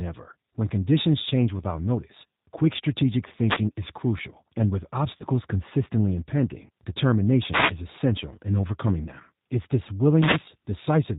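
The whole speech clip carries the sound of the G.729 codec. The damage is plainly audible. The codec rebuilds the voice from a vocal tract model, a pitch predictor and a few pulses per frame. It does not send the waveform itself. Nothing above 4 kHz survives, so the speech sounds narrow and dull. It also has a rough, slightly synthetic texture. That fits a low-rate VoIP link of about 8 kbit/s.

From 3.43 to 3.64 s comes a wireless microphone noise hit. A short swish of static washes over the voice. The analogue FM radio link faded as reflected signals cancelled the direct one. Receiver noise rose to fill the gap. A second hit follows from 7.49 to 7.74 s, with the same burst of static.

Between them, from 5.17 to 5.24 s, there is VoIP packet loss concealed by the speech codec. The loss amounts to about 30 ms of audio, likely a single packet. The decoder had nothing new to play. It kept extrapolating from its last pitch and filter settings and lowered the gain frame by frame. 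The sound is stretched out and fades. Each frame depends on the one before. So the voice stays weak or distorted for tens of milliseconds after the audio returns.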